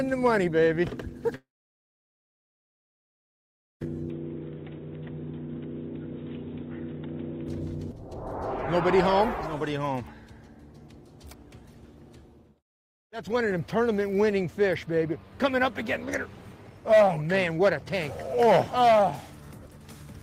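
At 1.35 s the audio cuts out, and after a brief fading tail there's just silence until it picks up again at 3.83 s. Roughly 2.5 s is simply gone, not delayed, which points to a long network dropout as the likely cause. Then from 4.10 to 7.48 s the sound goes dull and boxy, with nothing above 3.8 kHz and a faint new noise floor sitting well under it. The level stays about the same and there's no gap at either switch. That's likely the input switched to a poorer device, such as a headset call profile, before it switches back and clears up.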